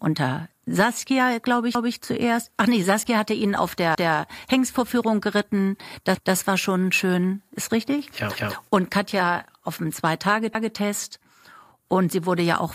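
Speech clip with overlapping chunks: right after "hatte ihn auf" at 3.95 s, and again at 10.55 s, about 200 ms replays as 2-second chunks start before the previous one finishes, giving a stutter.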